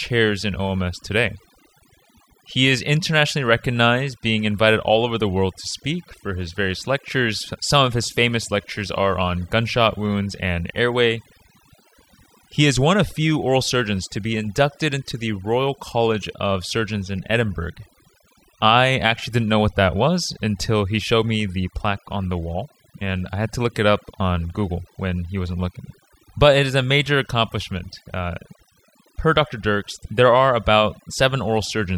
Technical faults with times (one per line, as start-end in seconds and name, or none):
0.00-31.98 overdone noise removal